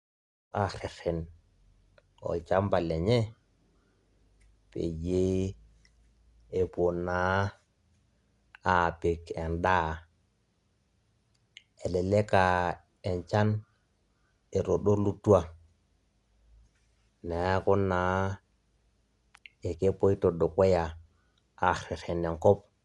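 Throughout the speech, after a brief fade-in that finishes at 0.53 s, the sound is dull and roughly fluttering, with nothing above 11.5 kHz. This is likely Dolby Digital compression at a low bitrate, around 64 kbps.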